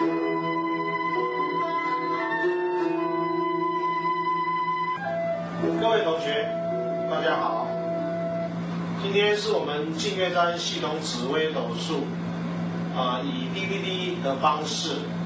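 Nothing is technically wrong with the clip; it has simply passed through a call's microphone processing, which trims the lowest bass and leaves nothing above 8 kHz.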